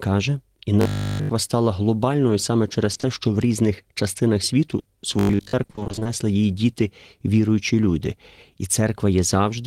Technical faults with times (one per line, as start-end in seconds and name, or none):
0.81-1.29 robotic sound from repeated short buffers
2.93-3.05 short concealed packet loss
4.79-4.87 burst of packet loss
5.19-5.53 robotic sound from repeated short buffers
5.63-6.07 repeated packet loss (robotic sound)